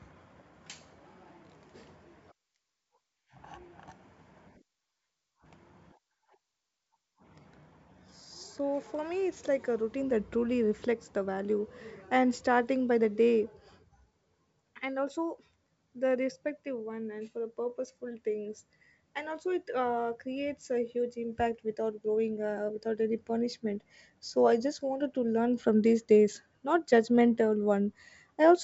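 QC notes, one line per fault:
Nothing to flag here; it's a speech recording carried over G.722 wideband telephone coding, with the full bandwidth up to about 7 kHz you'd expect from the codec running at its top 64 kbit/s mode.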